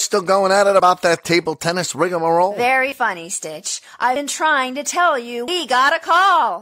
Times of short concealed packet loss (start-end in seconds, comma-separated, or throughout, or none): none